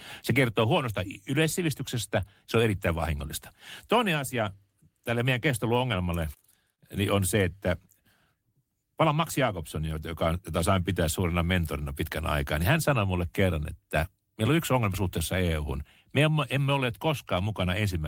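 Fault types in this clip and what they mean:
Nothing stood out on listening to the speech in this clip.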